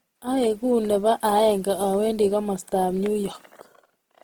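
Throughout the speech, tones sound rough, grainy and noisy. The cause is likely Opus compression in its music mode. The damage is plainly audible, which fits a rate near 16 kbps. Starved bands get filled with noise or folded copies. Bandwidth stays full, to about 20.1 kHz.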